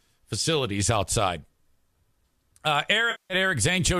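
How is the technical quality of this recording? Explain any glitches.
One glitch stands out: a stretch of AAC frame loss with concealment in this speech, from about 3.11 to 3.34 s. Roughly 190 ms of coded audio never reached the decoder, a gap that points to a run of consecutive lost frames rather than a single drop. The decoder covered the hole by rebuilding sound from the last spectrum it had received, so the passage turns smeared and noisy or phasey instead of falling fully silent. The speech throughout also carries a light coding texture, likely from low-delay AAC compression.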